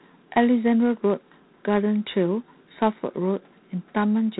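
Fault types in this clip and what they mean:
G.726 ADPCM: A harsh, rasping hiss rides on the speech throughout, swelling and fading with its level, and nothing above 4 kHz comes through. The grit points to telephone-band adaptive differential coding at about 3 bits a sample, which fits G.726 at 24 kbit/s.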